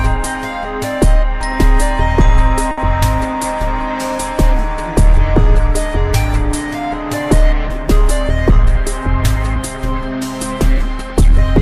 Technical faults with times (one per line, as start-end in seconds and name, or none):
2.71-2.80 short stall from a late packet